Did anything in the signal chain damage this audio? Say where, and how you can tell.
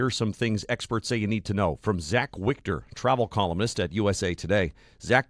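No, nothing in the chain audibly damaged this speech.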